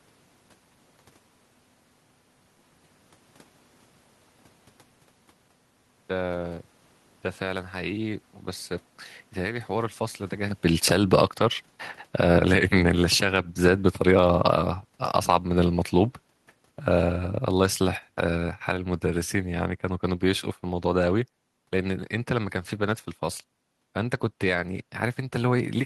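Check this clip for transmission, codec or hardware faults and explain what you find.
One hardware-side fault shows up: automatic gain falling, from 10.67 s to 22.59 s. The gain control decided the input was too hot or its background noise too strong, and eased its gain down by about 14 dB over those twelve seconds, so the speech and the room noise behind it sink together. That shared drop is what separates it from the talker shifting position just before it.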